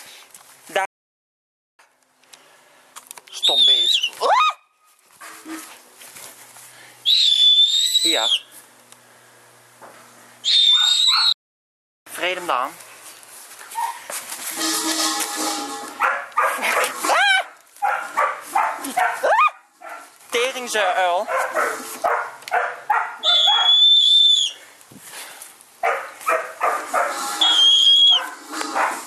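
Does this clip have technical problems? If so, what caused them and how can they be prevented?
Yes. There are two playback stalls, at 0.85 to 1.79 s and at 11.32 to 12.07 s. The sound cuts to silence for about 0.94 s and then 0.74 s before resuming. The likely cause is the player running out of buffered data or its thread being blocked. A larger playback buffer and a non-blocking audio thread would prevent this.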